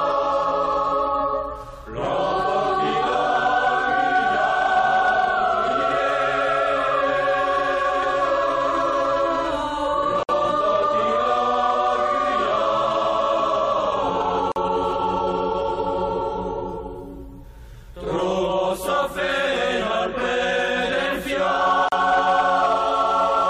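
At 10.23 s (58 ms), 14.52 s (43 ms) and 21.89 s (36 ms), a gap at a join of encoded pieces: untrimmed encoder delay and padding leave silences that show as blank vertical strips with slightly smeared edges.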